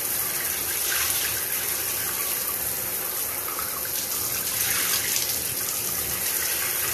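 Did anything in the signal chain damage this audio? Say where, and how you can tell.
No, nothing in the signal chain damaged this audio.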